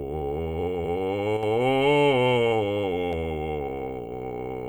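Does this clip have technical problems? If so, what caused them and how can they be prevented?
Yes. From 1.37 to 1.43 s the music dips by about 6 dB, likely one channel dropping out before mono summing, visible as a full-band step down in the waveform. Secure stereo connections and monitor both channels before summing.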